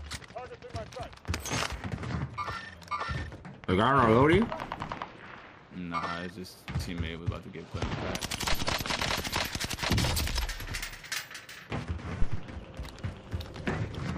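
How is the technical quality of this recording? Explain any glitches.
Two deep, low thuds break into the recording, at 8.52 to 8.80 s (peaking at about -19 dBFS) and 12.22 to 12.50 s (louder, at about -13 dBFS), each dying away in roughly 60 ms. These are phantom power thumps: switching phantom power on a live input sends a voltage step through the coupling capacitors.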